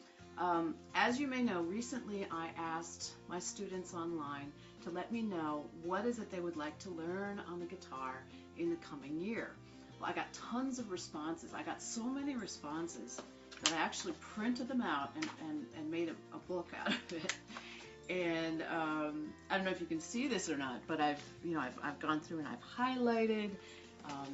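No technical faults occur anywhere in the audio, which carries the narrowed, 8 kHz-limited sound of a normal call path.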